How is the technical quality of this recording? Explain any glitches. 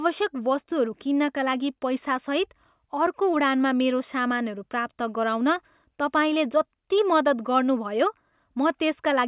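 The technical quality of this recording is good, with no glitches to explain.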